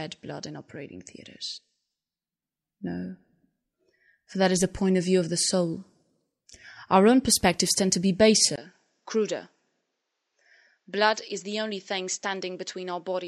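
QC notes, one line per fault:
8.56–13.28 s, input switched to a poorer device: the input likely changed to a narrower-band microphone after "perspectives tend to be", leaving a 20 ms gap. Then nothing sounds above 7.7 kHz, the level drops about 5 dB and a faint new noise floor appears, so the sound turns dull.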